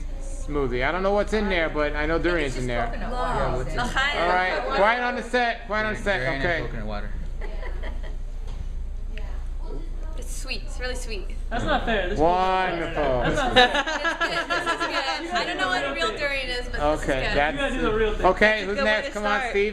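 No technical faults are audible.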